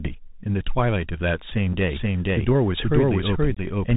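Throughout, the sound carries the Bluetooth CVSD headset codec. Its one-bit delta modulation, consistent with a 64 kbps CVSD link, tracks only whether each sample rises or falls, with an adapting step size. Nothing above 4 kHz survives, so the audio is narrowband. Fast, loud high-frequency content outruns the step and distorts, sibilants turn scratchy, and a granular hiss sits under the speech. The damage is plainly audible.

From 1.73 to 1.75 s there is unconcealed Bluetooth headset packet loss. About 7.5 ms of audio, roughly a single packet, went missing between headset and phone and was replaced by silence or an idle pattern. It is heard as a very short hole with hard edges that can click, and the signal returns briefly quieter, as a CVSD decoder does while its step size recovers.

At 1.88 s a doubled audio track begins and runs to the end of the clip. A second full-band copy of the same audio trails the original by about half a second at roughly equal level. 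It has no decay or room colouring, and it starts abruptly rather than fading in. The likely cause is the signal being picked up a second time through a slower path, or an edit holding two misaligned copies.

A second unconcealed Bluetooth headset packet loss falls between 3.55 and 3.60 s. This one removes 22.5 ms, about three consecutive packets, so the gap is longer. It is an abrupt dropout with hard edges, followed by a moment of reduced level as the codec settles.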